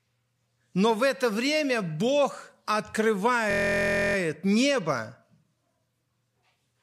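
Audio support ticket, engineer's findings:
System hang loop, 3.51 to 4.16 s. Speech replaced by a steady buzz at 43.1 Hz. A 23.22 ms fragment repeats exactly, about 28 times. Probable component: driver or host stall. The audio hardware kept replaying the same ring buffer. Loop length fits a 1024-sample buffer. Playback resumes afterward with next to no audio missing.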